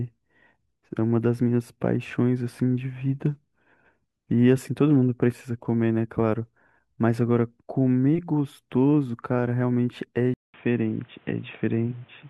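Speech, and at 10.34 s there's a 200 ms gap before the sound goes dull and boxy through to the end, with nothing above 3.8 kHz, a faint new noise underneath about 35 dB below the speech, and the level about the same. That's likely the input switched to a poorer device.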